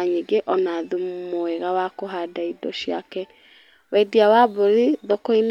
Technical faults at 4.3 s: none

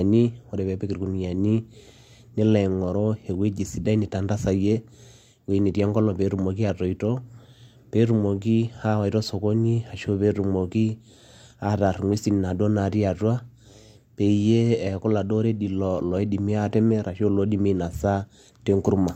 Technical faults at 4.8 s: none

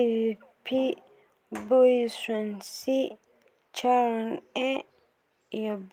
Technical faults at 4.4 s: none

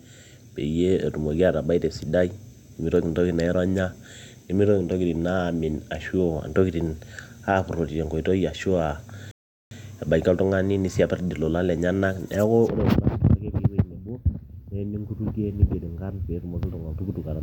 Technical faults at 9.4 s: rebuffering stall

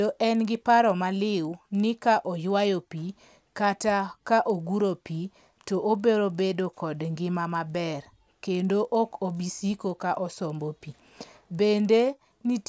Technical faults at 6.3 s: resampler restarted on every block

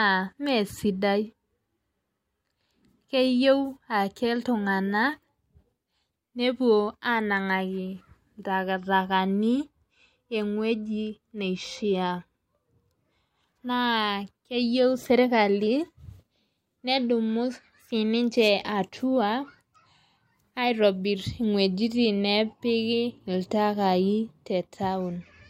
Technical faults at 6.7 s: none

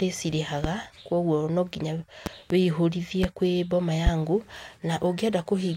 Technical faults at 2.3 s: loud pop

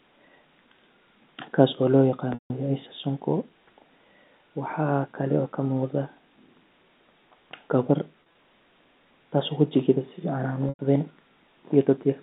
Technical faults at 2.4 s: packet loss with pitch repetition

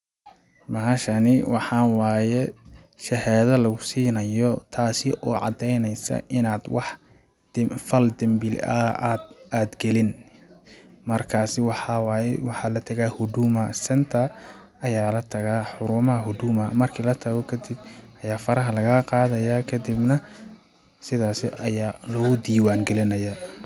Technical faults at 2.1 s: resampler restarted on every block

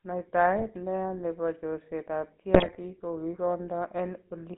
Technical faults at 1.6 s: GSM full-rate codec

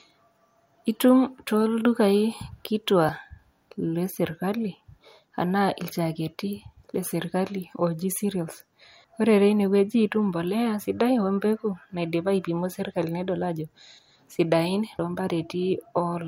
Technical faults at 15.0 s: audio missing between chunks

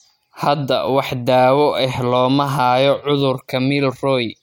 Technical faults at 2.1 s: Bluetooth SBC bit pool drop

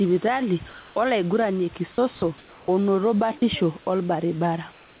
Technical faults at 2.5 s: comfort noise in place of the background

